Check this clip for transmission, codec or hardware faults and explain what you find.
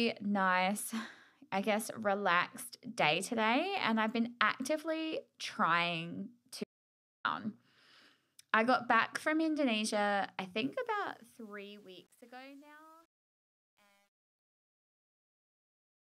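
Two faults show up in this speech clip: a hard dropout partway through and gritty truncation on the closing fade.

The audio dropout to silence runs from 6.64 to 7.25 s, right after "I've been actively trying." For about 0.61 s everything goes silent, with no room tone at all, and then the speech snaps back in mid-flow. That dead silence likely means the input was lost for a moment, through a device glitch, a dropped link or a stray mute, while the recorder kept writing silence. Whatever was said in that gap is gone.

The truncation distortion on a fade starts at 10.63 s and runs to the end at 16.06 s. It's worst from 11.42 s on. As the level sinks, the tail turns grainy. That happens when the fade stage keeps too few bits and adds no dither, which fits a resolution of about 10 bits. Near the bottom, the waveform collapses into a few coarse square steps.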